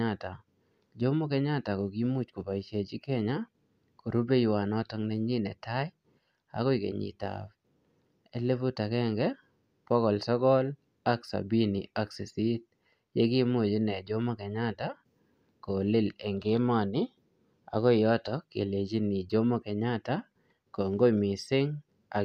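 A speech recording with no technical faults to report. Nothing in it calls for a time, a value or a cause.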